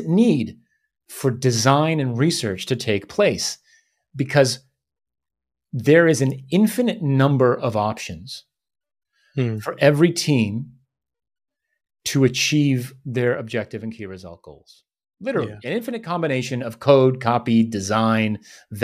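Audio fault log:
The speech signal reaches the listener intact, with nothing in its level, timing or frequency content departing from the source.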